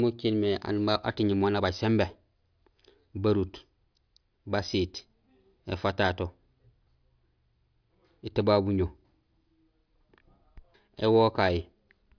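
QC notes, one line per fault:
No faults heard anywhere in this speech recording.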